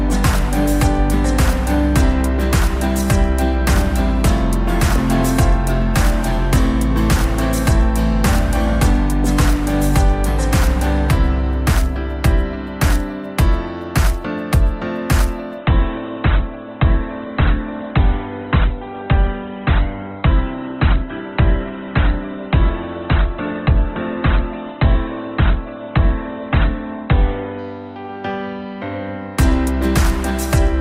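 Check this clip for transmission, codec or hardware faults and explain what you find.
One fault: from 15.58 s to 27.58 s the top end collapses, with nothing above 4.2 kHz and swirly artefacts, then recovers instantly. This is an adaptive stream at a lower bitrate, a sudden gapless switch that points to Opus dropping from roughly 64 to 12 kbit/s.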